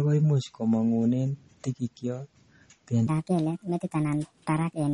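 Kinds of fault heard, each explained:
MP3 compression: The encoder was likely starved of bits, which fits a low bitrate of around 32 kbps. It cut the treble at a fixed frequency and let weak frequency lines drop in and out from frame to frame. The speech therefore sounds dull at the top, with a watery, swirling texture and metallic chirps on s sounds. The damage is plainly audible across the whole clip.
section at the wrong speed: From 3.07 s to the end, the audio was likely played back against the wrong clock, running 1.39 times faster than it was recorded. Because speed and pitch are tied together, the speech in that stretch jumps up by about five semitones and turns high and hurried. The abrupt shift marks where the mismatched section begins, and it lasts through the final part of the clip.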